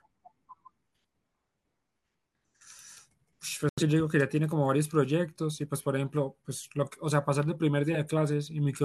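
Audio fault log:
3.69–3.82 s, digital broadcast dropout: the speech cuts abruptly to silence for about 0.13 s, then resumes further along with nothing recovered. The receiver muted while frames were missing or corrupt, and the hole points to roughly two lost frames, about 85 ms of programme.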